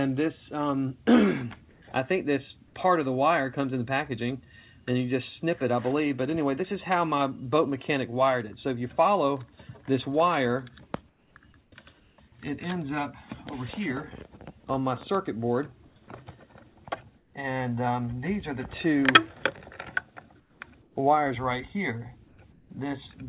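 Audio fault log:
1.72–1.82 s, 11.08–11.36 s, 11.64–11.72 s, 12.0–12.18 s, 15.88–15.96 s, 17.18–17.34 s, 20.4–20.96 s and 22.28–22.7 s, comfort noise in place of the background: in each pause the real background gives way to a smooth, textureless hiss, dipping by about 2 to 8 dB where measurable, within a band that stops at 4 kHz. The likely cause is discontinuous transmission: the sender went silent in these gaps and the receiver synthesised shaped noise to cover them.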